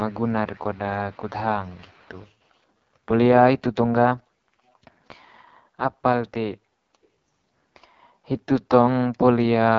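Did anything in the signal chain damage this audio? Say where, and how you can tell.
Yes. At the codec stage, the AMR wideband (HD Voice) codec damages the whole clip. The speech is rough and raspy throughout, which fits its lowest 6.6 kbit/s mode. Nothing is present above about 7.4 kHz. That wider band separates it from narrowband telephone coding.

In the call processing, there is an echo leak at 0.08–0.33, 0.53–0.79, 1.11–1.3 and 1.63–2.3 s. A faint copy of the speech returns 307 ms late, roughly 30 dB down, and about 35 dB down in the last stretch. It is likely a far-end loudspeaker's residual echo that escaped cancellation. Room reverberation would decay smoothly rather than repeat as a discrete copy.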